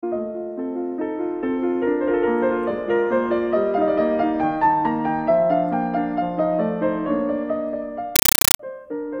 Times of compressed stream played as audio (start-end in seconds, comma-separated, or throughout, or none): 8.16-8.59